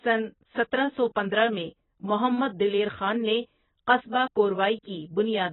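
Throughout, the speech sounds dull and smeared, cut off above 3.9 kHz with a warbly texture. This is likely heavy AAC compression at a bitrate around 16 kbps.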